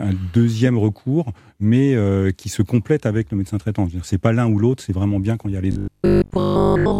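Speech in which, right after "il y a les", the sound turns into a rigid, metallic 50 Hz buzz from 5.72 s to the end at 6.99 s. This is robotic sound from repeated short buffers, likely caused by audio arriving too seldom and roughly 20 ms chunks repeating in place of most of the real audio.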